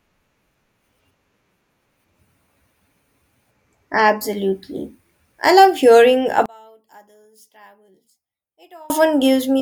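From 6.46 s to 8.90 s the speech drops by about 33 dB, collapsing to a faint residue before returning at full level. The likely cause is one channel inverted: with one side's polarity reversed, the centred voice and low end cancel when the two channels are summed, leaving only the small difference between them. What survives is a faint copy of the speech.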